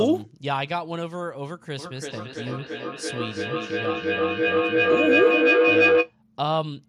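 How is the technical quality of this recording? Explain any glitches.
The recording has one serious fault: feedback howl. It runs from 1.79 s to 6.16 s. Two devices in the same room are joined to one call. Sound from the loudspeaker re-enters the microphone and comes back louder each time. The repeats narrow to a tone around 500 Hz and come round about every third of a second. At its peak the howl is about 6 dB louder than the speech. Then it stops.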